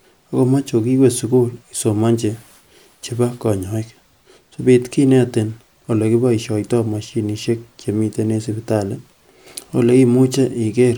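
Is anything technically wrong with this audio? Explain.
No, nothing technically wrong turns up anywhere in this speech recording, so there's nothing here to flag.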